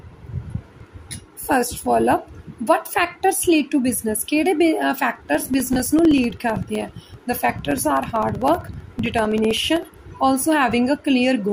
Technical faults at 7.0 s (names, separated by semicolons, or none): periodic USB or driver dropouts